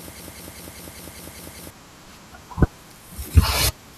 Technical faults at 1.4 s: broken-record loop

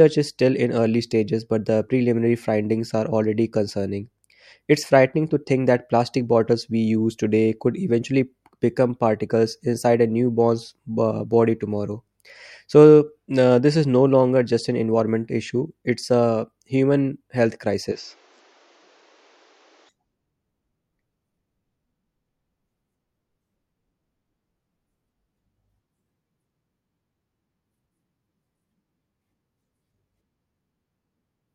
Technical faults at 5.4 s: none

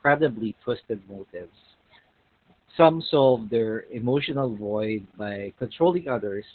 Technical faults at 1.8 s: Opus voice compression

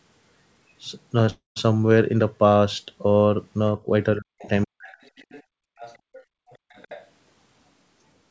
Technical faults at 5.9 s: other side's voice leaking through; background gated by the echo canceller

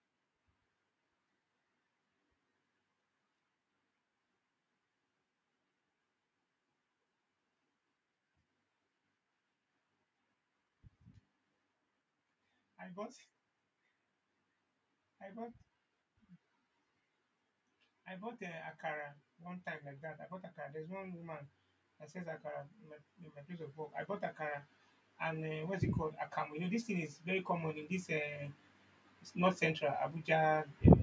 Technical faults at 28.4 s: automatic gain rising

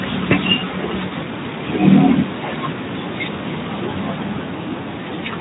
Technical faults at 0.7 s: none

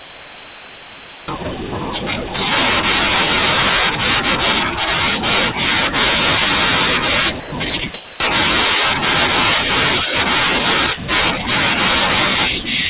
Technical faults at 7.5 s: sound dropped by the voice detector

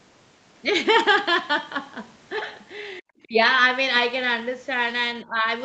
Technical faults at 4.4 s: none

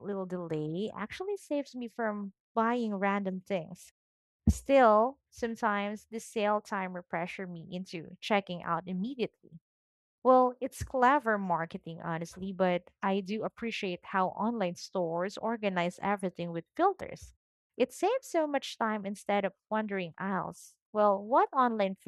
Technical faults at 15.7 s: none

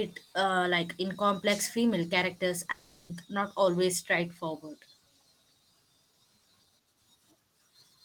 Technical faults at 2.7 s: long network dropout

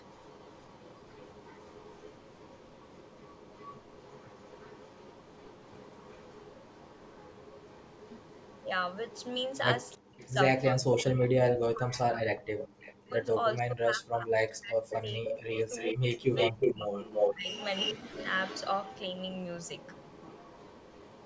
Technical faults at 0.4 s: echo leak

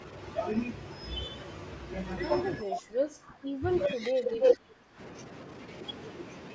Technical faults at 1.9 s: none

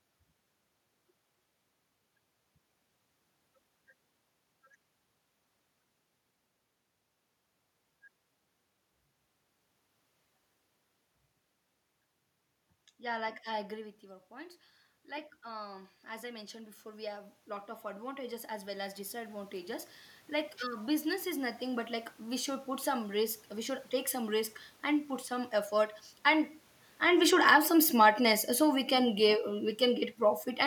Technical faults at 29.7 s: automatic gain falling

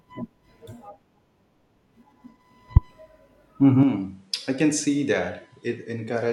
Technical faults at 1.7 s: none

